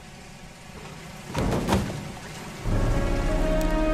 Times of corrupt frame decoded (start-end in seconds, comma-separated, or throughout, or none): 0.74-0.81